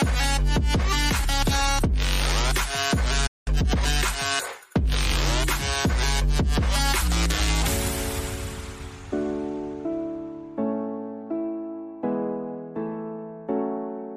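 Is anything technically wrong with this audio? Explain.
Yes, there are two linked faults early in the clip.

From 3.26 to 3.48 s there is a playback stall: the sound halts mid-flow and the output goes silent for about 0.19 s. This is likely the player running short of buffered data or having its output thread held up. What separates it from a brief dropout is the length of the silence.

From 3.48 to 3.86 s comes time-compressed catch-up. Having fallen behind, the player trims its backlog by removing small slices and cross-fading across the joins, so this stretch runs at about 1.5 times normal speed. Unlike a simple faster playback rate, the pitch stays where it was. The hurried pace at unchanged pitch marks it as catch-up rather than a resampling or clock fault.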